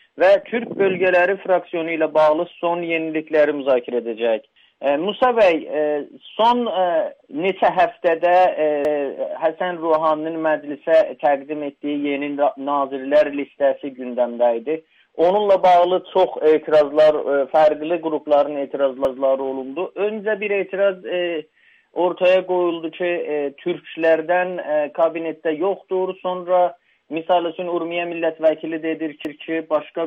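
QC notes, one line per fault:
8.85–9.05 s, 19.05–19.25 s, 29.25–29.45 s: overlapping chunks. Each new 10 s block starts 200 ms before the previous one ends, so that slice plays twice as a brief stutter. Unlike a dropout, nothing is lost, and the repeats recur at a steady 10.2 s spacing.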